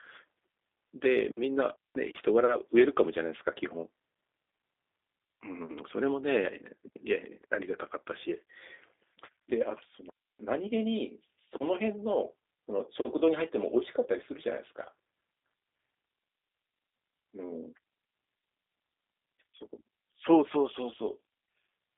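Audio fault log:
Throughout, G.729 codec: the speech is confined to roughly 300 Hz to 3.7 kHz and sounds slightly rough and synthetic, plainly so. A few pulses per frame rebuild it, which fits an 8 kbit/s coder. That buzzy, modelled texture sets it apart from simple band-limiting.
1.76–1.95 s and 10.10–10.40 s, digital wireless dropout: the receiver lost too much data and muted for about 190 ms, then about 300 ms, with very brief fades. Each is a clean hole of near silence with no noise burst on either side, unlike an analogue fade or a packet-loss glitch.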